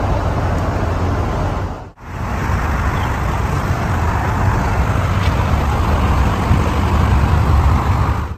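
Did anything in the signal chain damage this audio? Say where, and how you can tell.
Yes. From 2.44 s to the end, a time-stretched section runs about 1.64 times faster at unchanged pitch, sounding rushed. The likely cause is software compressing duration by dropping short segments. A spectrogram shows harmonics at steady frequencies but compressed events with abrupt splice seams.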